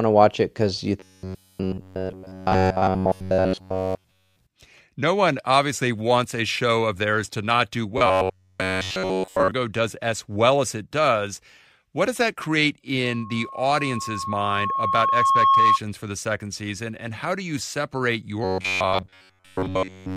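From 1.0 to 4.41 s the speech collapses into a rigid metallic buzz at 93.8 Hz, the robotic sound from repeated short buffers. The likely cause is audio arriving too seldom, so nearly all of it is replaced by repeats of a roughly 10.7 ms chunk. The same buzz returns from 7.98 to 9.51 s, between "theirs to not do" and "does as well as". At 13.04 s, after "what does that create", a 1.1 kHz tone swells over about three seconds into a loudspeaker feedback squeal about 5 dB above the speech, because the microphone is picking up its own loudspeaker. The squeal stops at 15.79 s, before "for the second season". After "how do you separate", the robotic buzz comes back from 18.44 s and runs to the end of the clip.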